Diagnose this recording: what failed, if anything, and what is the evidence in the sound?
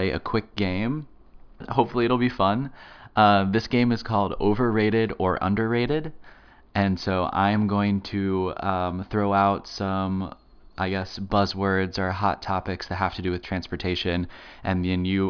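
No faults detected in this recording.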